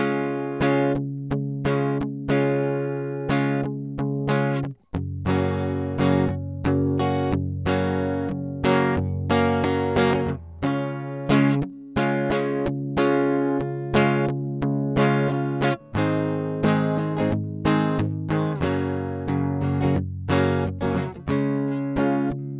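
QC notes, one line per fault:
No faults found in this music.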